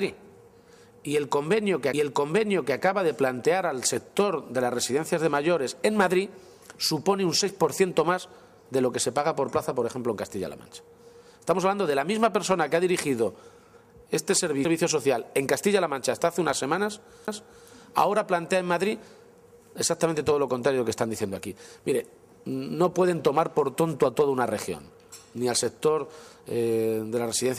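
Three brief ticks break the audio at 1.93, 14.65 and 17.27 s, each a near-instant dropout of roughly a few milliseconds to about 10 ms, after which the sound resumes from a different point rather than where it left off. These are CD skips: a knock or a flaw on the disc threw the laser onto another turn of the spiral, so the player muted briefly and picked up playback from the wrong place.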